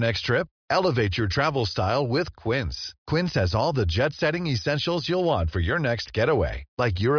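No technical faults can be heard anywhere in the recording.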